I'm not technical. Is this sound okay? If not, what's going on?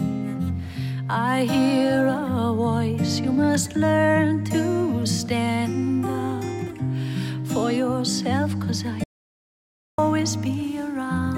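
No. From 9.04 to 9.98 seconds the sound cuts out completely for almost a second, an audio dropout to silence. Unlike a natural pause, even the room's background sound vanishes. The input was likely lost briefly, so that moment is gone.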